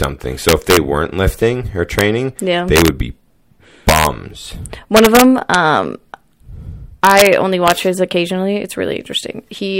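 Speech with integer overflow: loud peaks wrap to the opposite sign instead of being limited, giving violent cracks far sharper than clipping's flattened distortion. They occur at 0.04, 0.49–0.77 (just before "weren't lifting or"), 1.99–2.01 (just before "yeah they"), 2.76–2.88, 3.89–4.07, 4.97–5.55, 7.05–7.27 and 7.68–7.72 s (just before "his occasionally"). The signal exceeds the limit by up to about 4 dB.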